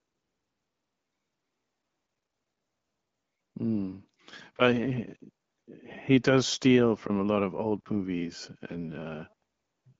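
The speech in this clip carries no technical faults, and its passage through the AMR wideband (HD Voice) codec leaves only light coding traces, with a clear, unroughened band up to about 7 kHz that fits a setting near 15.85 kbit/s.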